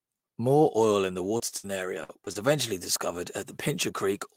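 Speech, hit by network dropouts. Short concealed packet loss smears the sound briefly at 1.37 s after "oil in the", at 2.25 s, and at 2.32 s just before "eventually discovered". Each time about 20 ms went missing and was patched. Two bursts of packet loss are longer. At 1.57 to 1.66 s, still after "oil in the", the receiver extends the last sound and fades it down, and about 60 ms is lost. At 2.04 to 2.11 s about 40 ms disappears the same way.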